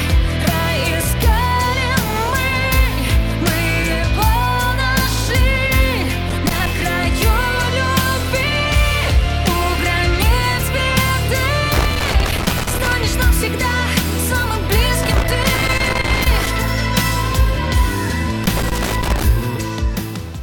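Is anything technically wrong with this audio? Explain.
Yes. Loose connector crackle bursts at 6.29–6.67 s, 11.74–12.93 s, 15.03–16.47 s and 18.44–19.24 s: a worn contact intermittently breaks the signal, producing irregular scratchy crackle.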